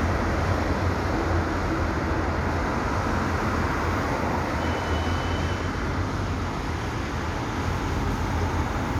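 No technical faults can be heard.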